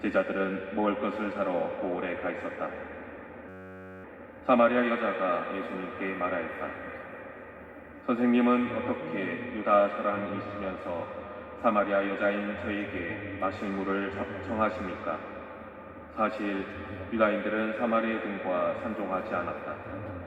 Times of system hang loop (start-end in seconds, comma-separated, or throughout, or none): 3.49-4.04